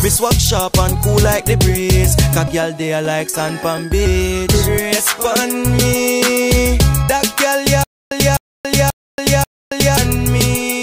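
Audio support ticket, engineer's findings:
Stutter with silent gaps, 7.84–9.97 s: a 255 ms fragment repeats four times with about 280 ms of digital silence between. Likely a stalled player or stream buffer replaying its last chunk. The missing audio is gone.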